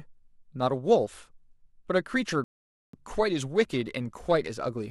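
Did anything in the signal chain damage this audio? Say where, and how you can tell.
Yes. At playback, a rebuffering stall stops the speech from 2.44 to 2.94 s, leaving about half a second of silence. The player exhausted its downloaded audio and waited for more data before continuing. What sets this apart from a network dropout or packet loss is that nothing goes missing: the speech picks up at exactly the point where it stopped, with no skipped syllable or jump. The clip simply runs about 0.49 s longer.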